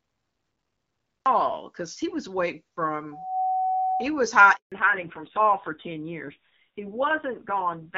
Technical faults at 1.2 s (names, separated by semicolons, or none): cut-off start